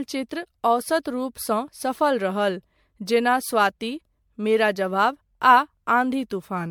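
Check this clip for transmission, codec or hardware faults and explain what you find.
One codec fault runs through the whole speech recording. Generation loss, present from start to finish: the sound is swirly, smeared and hollow, and consonant attacks are blurred, well beyond what a single MP3 pass at a rate that fits 96 kbit/s would produce. The likely cause is repeated decoding and re-encoding, around seven passes, each quantising on a shifted frame grid so noise and spectral gaps pile up. Content stops near 19.9 kHz.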